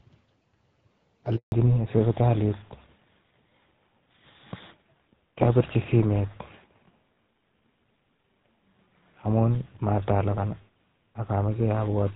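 A speech recording carried over a phone call, with two linked faults. At 1.36 s the sound cuts out for 160 ms, until 1.52 s. This is a handover gap: while the call moved between networks, no speech frames arrived, so the audio fades within a few tens of milliseconds and stays silent until the new link starts. Unlike a dropout from packet loss, it happens once and the link afterwards sounds different, not the same as before. From 1.52 s to the end, the sound is a fallback to narrowband. Everything above 4 kHz is gone, and the speech turns duller and rougher, which fits a switch from AMR wideband (HD Voice) at around 12.65 kbit/s to GSM full rate. What sets this apart from a low-pass filter or a lower-bitrate mode of the same codec is the sudden, lasting change right at the gap. Before 1.36 s the wideband codec leaves only light coding damage.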